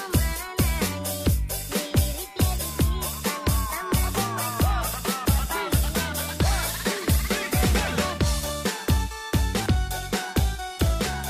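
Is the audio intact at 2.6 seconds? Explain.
No. From 2.56 to 2.61 s, compressed frames were skipped, roughly 300 ms (about seven 46 ms frames), so the audio jumps ahead by that much at the join.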